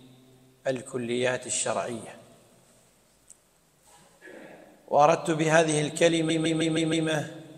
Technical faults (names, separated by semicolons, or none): repeated frames